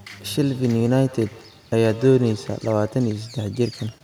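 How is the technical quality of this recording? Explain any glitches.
Quality takes a hit from feedback echo between two devices, from 0.45 to 3.19 s. A second device in the room replays the talker, the mic picks it up again, and the canceller ignores it, so speech returns about every 150 ms, peaking around 18 dB below the voice.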